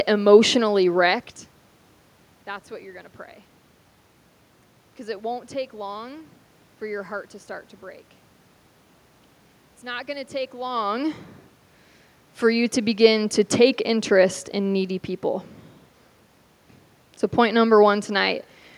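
No technical faults are present.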